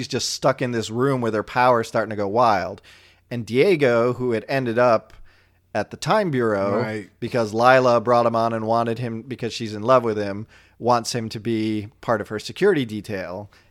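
No technical faults can be heard anywhere in this speech recording.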